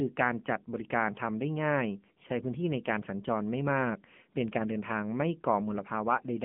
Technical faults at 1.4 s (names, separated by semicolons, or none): AMR narrowband mobile codec